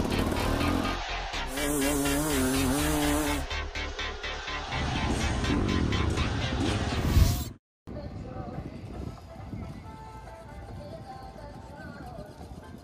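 No technical faults are audible.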